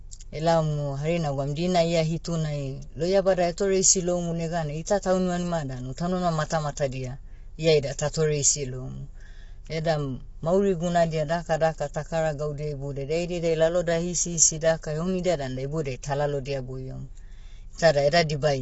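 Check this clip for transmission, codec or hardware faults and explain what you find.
One codec fault runs through the whole clip. Throughout, the speech sounds rough and grainy, with noise filling the gaps between pitch harmonics and nothing above 7.7 kHz. This is likely low-delay AAC compression (AAC-ELD). Its very short frames resolve harmonics poorly, and the damage fits a bitrate near 24 kbps.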